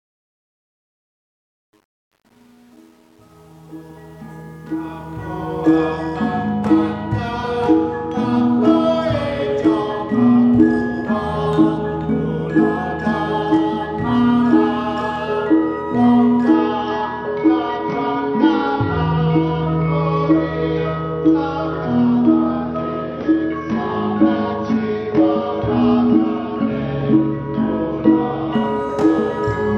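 From the start of the clip to 5.76 s, the fade-in shows truncation distortion on a fade. The gain stage drops the low-order bits without dither, so the rising level is built from coarse steps, consistent with roughly 9-bit resolution. The quietest part, from 0.0 to about 4.7 s, sounds gritty. On the waveform the low-level signal looks blocky and stair-stepped. The spectrogram shows broadband distortion speckle instead of a clean, growing signal.

From 16.54 to 28.54 s, the adaptive stream switches to a lower bitrate. The treble is cut off abruptly, with nothing above 6.3 kHz, and compression artefacts become audible. This fits the stream dropping from about 96 kbit/s to 32 kbit/s AAC. The change is sudden in both directions, with no gap or dropout. On the spectrogram the upper band disappears as a flat ceiling across that twelve-second block, and the waveform shows no break.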